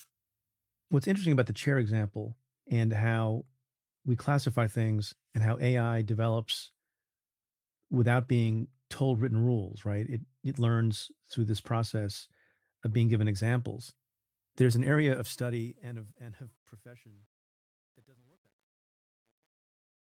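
At 8.39 to 8.57 s, lost packets were rebuilt from error correction, about 100 ms of low-bitrate copies, which fits five packets, so the speech turns rougher and noisier without a gap. From 15.03 s to the end, the smooth fade-out that starts around 15 s shows truncation distortion, with too few bits and no dither (which fits a 10-bit stage). The tail turns gritty, worst from 16.36 s.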